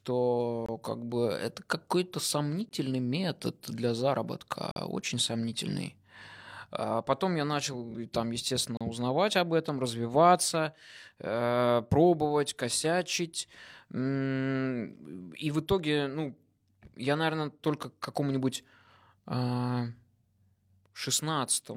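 Gaps between stream segments cut hard-edged silences into the speech at 0.66–0.69 s before "как бы это", at 2.69 s, at 4.71–4.76 s before "очень сомнительный", and at 8.77–8.81 s before "узнавать об этом развиваться". They last 18 to 47 ms, and their roughly 2-second spacing points to segment boundaries whose timestamps don't meet, so the player fills the space with silence. Unlike a dropout, nothing is lost: the sound resumes where it stopped, just slightly late.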